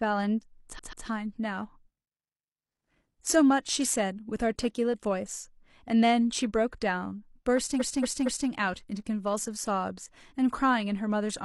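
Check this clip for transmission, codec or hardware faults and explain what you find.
Two stretches of repeated frames disrupt the speech. From 0.75 to 1.03 s, a 0.14 s block plays three times. From 7.76 to 8.46 s, a 0.23 s block plays four times. Compressed frames were duplicated, so each repeat is an exact copy that stutters and lengthens the audio, unlike an echo, which decays.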